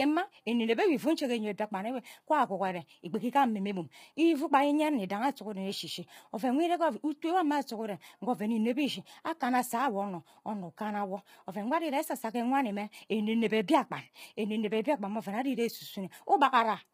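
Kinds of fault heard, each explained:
Low-delay AAC compression: the speech is rough and grainy throughout, with noise filling the gaps between harmonics and a thin, synthetic top band. This is likely a low-delay AAC codec whose short frames resolve pitch poorly, consistent with a bitrate around 24 kbps.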